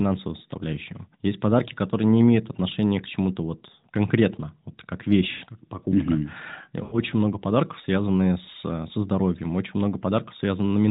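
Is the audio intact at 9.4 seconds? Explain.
Yes, at 9.4 s the speech runs intact, carrying only the narrow telephone-band character of the AMR narrowband mobile codec, with nothing above 4 kHz.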